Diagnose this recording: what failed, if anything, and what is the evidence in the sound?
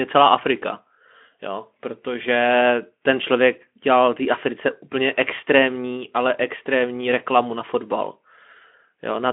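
Nothing failed here: the speech arrives over a Speex link on a phone-band line, with the sound held to roughly 200 Hz to 3.4 kHz and nothing above about 3.6 kHz, which is simply how that kind of connection sounds.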